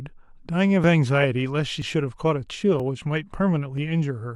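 At 1.82, 2.80 and 3.78 s the speech skips abruptly, each time losing around 20 ms with the two sides butted together. The roughly one-second spacing points to audio missing between chunks, likely dropped while the recorder closed one block and opened the next.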